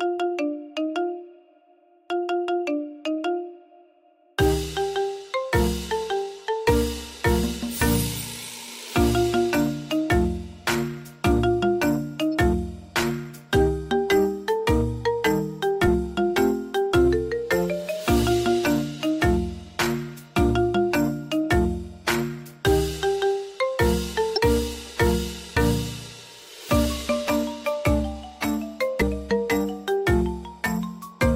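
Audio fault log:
12.31–12.33 s, 24.36–24.38 s and 29.00 s: damaged data in a compressed stream. Each is a short blip or squawk, 16 to 24 ms long, where corrupted bytes make the decoder misread the frames, lose sync and hunt for the next valid frame header. On a spectrogram each shows as a thin vertical smear of broadband energy out of keeping with its surroundings. The waveform shows an abrupt discontinuity there rather than a smooth transition.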